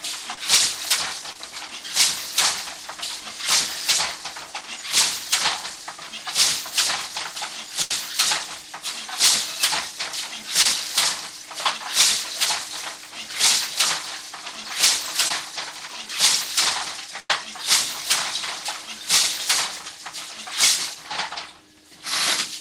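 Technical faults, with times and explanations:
0.34–0.38 s, 1.33–1.36 s, 10.62–10.66 s and 15.28–15.31 s: short concealed packet loss. Each time, a packet arrived too late for the decoder to play. About 20 to 30 ms of real audio is lost at each point. The receiver bridged the hole by extending the sound just before it, then crossfaded back into the real signal. The result is a quick smear or wobble rather than a clean gap.
7.82–7.91 s and 17.20–17.30 s: burst of packet loss. Here several packets in a row failed to arrive in time. About 80 ms and 90 ms of audio are missing. The receiver kept continuing the last sound for the length of the hole and faded it down as the gap went on. This leaves a held, dimming tail. The audio then jumps ahead, and the stretch in between never plays.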